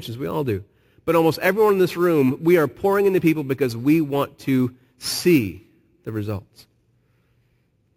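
A speech clip with imaging from sample-and-hold upsampling throughout. A bright, metallic fizz rides on the speech. It swells and fades with the level of the sound. Its first band sits between 8 kHz and 16 kHz, about 22 dB below the speech. That points to a 16 kHz original raised to 44.1 kHz by repeating each sample. No smoothing filter removed the mirrored spectrum. The lowest copy moves opposite to the pitch of the speech.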